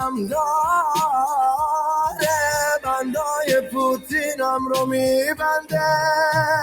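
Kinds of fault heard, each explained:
Noise suppressor applied to music or sounds: a speech-tuned suppressor treats steady sustained content as noise, so onsets pass while held sound sinks by around 5 dB, pumping throughout; the waveform shows envelopes dipping after each attack, and the spectrogram shows sustained bands fading and flickering.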